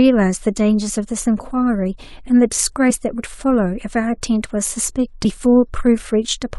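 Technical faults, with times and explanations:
5.24 s, damaged data in a compressed stream: a brief glitch cuts across the speech for roughly a hundredth of a second. A stretch of the encoded bitstream here has been corrupted, so the decoder cannot parse the frame as written. It either renders garbage coefficients for that instant or drops the frame, loses synchronisation, and scans forward to the next valid frame header before resuming. That produces the short glitch in the speech.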